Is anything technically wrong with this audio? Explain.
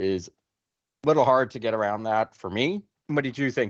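No, nothing technically wrong can be heard here.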